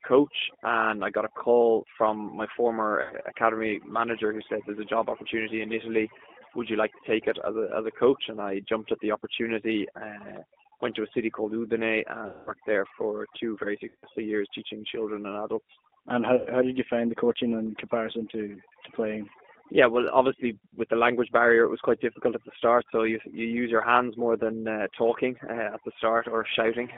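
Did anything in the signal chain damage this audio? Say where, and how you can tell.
Yes. At the call-processing stage, overdone noise removal leaves the background near silent with twinkling specks. On a spectrogram, isolated dots sit in black gaps between the speech.

At the codec stage, the rough, synthetic texture is the G.729 codec, and the rate fits 8 kbit/s. The spectrogram shows energy confined to roughly 250 Hz to 3.5 kHz, with nothing above.

At the network stage, VoIP packet loss concealed by the speech codec is heard at 3.02, 12.27, 13.89 and 16.36 s. About 80, 200, 140 and 100 ms are missing, replaced by sound extrapolated from the last pitch and filter that fades. Waveforms show repeating cycles shrinking in amplitude.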